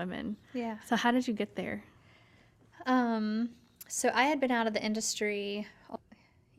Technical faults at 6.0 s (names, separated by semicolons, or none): stream segment skipped